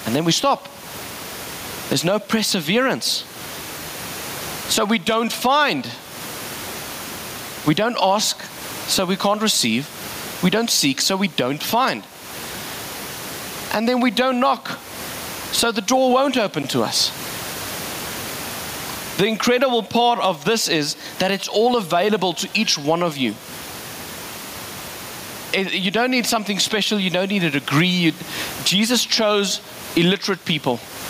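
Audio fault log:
Throughout, gain pumping: the room noise sits about 33 dB under the speech, and a gain swing of around 20 dB squashes everything; likely mic gain set far too high with a fast limiter clamping each loud peak.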